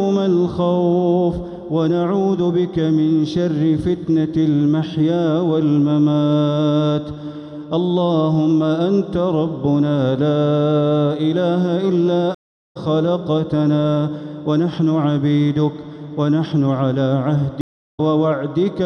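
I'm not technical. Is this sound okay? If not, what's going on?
No. There is a stream reconnect at 12.35 s and another at 17.61 s. Each time, the connection to the source dropped and the player went quiet for about 0.4 s (to 12.77 s and 18.0 s) while it reconnected. It then restarted mid-stream, so the sound picks up a little under half a second further on than where it stopped. That short stretch is skipped entirely, making the audio seem to jump forward.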